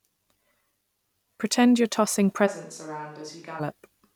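At 2.48 s the speech abruptly turns hollow and roomy, likely a switch to a distant microphone, until 3.59 s. The waveform drops by roughly 10 dB, low-frequency energy thins on the spectrogram, and a room-noise floor appears about 30 dB below the speech.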